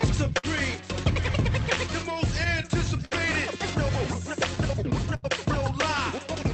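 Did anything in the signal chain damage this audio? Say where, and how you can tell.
Yes. Clock drift between sender and receiver, at the jitter buffer: the sender's clock runs roughly 4% slow, so the buffer keeps draining, causing uneven timing hiccups throughout.

Short stalls from a late packet, on the network side, at 0.38–0.46 s, 3.05–3.14 s and 5.16–5.26 s: the buffer ran empty and held the sound 50, 60 and 65 ms, losing nothing.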